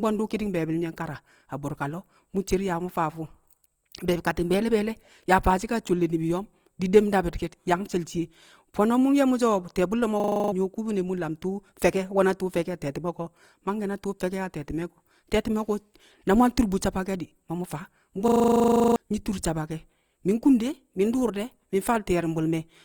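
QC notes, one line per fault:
throughout, Opus compression: likely a low-bitrate Opus encoder in music mode, short of bits and filling bands with noise, leaving the speech plainly rough and grainy.
10.2–10.52 s and 18.28–18.96 s, system hang loop: the system froze while the hardware replayed one 40 ms buffer, 8 and then 17 times, making a 25 Hz buzz after "ti̱ye̱ bu̱lle̱ mo̱" and after "di̱ ma mu̱ faa".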